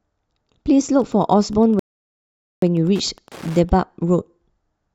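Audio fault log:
0.92 to 3.78 s, Wi-Fi interference: a steady tick about ten times a second, from a nearby radio's 102.4 ms beacon being rectified by the audio circuit, sitting roughly 30 dB under the speech.
1.79 to 2.62 s, rebuffering stall: the speech drops to silence for 829 ms while the player waits for more data, then picks up exactly where it left off.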